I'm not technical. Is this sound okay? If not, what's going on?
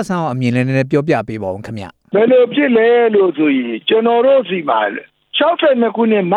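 No. At 1.45 s there is a single sharp click. The likely cause is dropped samples: a sliver of audio, roughly one sample and far shorter than a thousandth of a second, went missing, so the sound jumps abruptly from one point to a slightly later one. Unlike a dropout, nothing audibly goes silent or gets cut out; you hear only the click.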